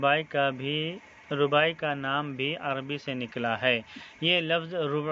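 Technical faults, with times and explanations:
No technical faults can be heard anywhere in this clip.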